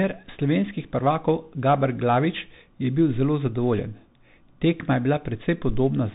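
Throughout the speech runs through a Bluetooth CVSD headset codec: nothing passes above about 3.8 kHz, and the one-bit delta coding leaves a granular hiss, scratchy s sounds and slope-overload grit on loud peaks, which fits a 64 kbps CVSD link and sets it apart from a clean low-pass filter.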